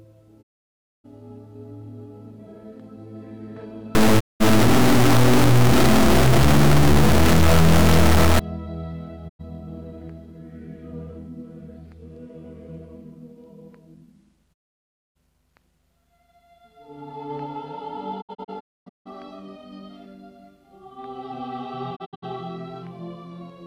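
At 0.41 s the sound fades out over about 20 ms and stays silent until 1.06 s. This is a digital broadcast dropout: the receiver stopped getting valid frames and muted, and the 608 ms gap fits a run of 32 ms frames. From 3.95 to 8.39 s distortion rides on the sound and fills quiet moments with noise. The likely cause is a stuck bit pushing about half the sample values off by a fixed step. Within that stretch a second dropout silences 4.19 to 4.42 s. Further mutes follow from 9.28 to 9.41 s and from 14.52 to 15.17 s. Between 18.20 and 19.08 s the sound breaks into several short holes, the longest 256 ms, and the same happens between 21.95 and 22.24 s, where the longest hole is 64 ms.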